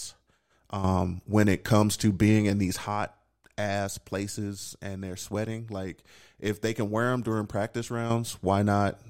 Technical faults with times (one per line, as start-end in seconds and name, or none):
0.84-2.87 sudden gain jump
8.10-9.10 sudden gain jump